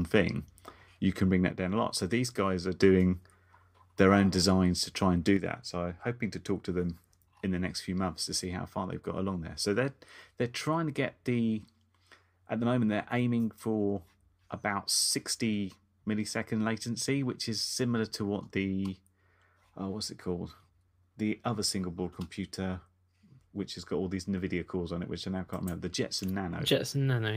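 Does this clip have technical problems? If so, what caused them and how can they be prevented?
Yes. The speech drops abruptly in level by about 6 dB from 1.51 to 2.80 s, just after "you can bring that", and again from 5.37 s to the end, after "to try and do". This is likely one channel dropping out before a mono sum. A fader move or fade would be gradual, but this step is sudden and sits at exactly half the amplitude. Secure stereo connectors and check both channel meters during recording.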